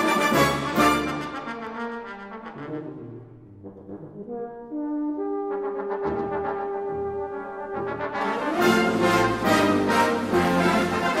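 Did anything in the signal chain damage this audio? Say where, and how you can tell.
Yes. From 1.67 to 8.33 s a dry, quieter copy trails about 100 ms behind. This is a doubled audio track, likely from a second, slower capture path.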